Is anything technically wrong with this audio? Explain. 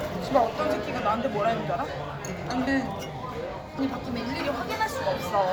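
Yes. At 2.67 s and 3.79 s, compressed frames are skipped. Roughly half a second of audio vanishes each time, consistent with several frames of about 93 ms going undecoded, so the audio jumps ahead at each point.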